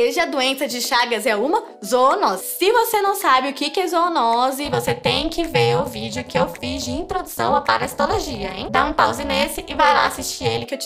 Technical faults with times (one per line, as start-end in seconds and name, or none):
4.65-10.65 overlap-add ripple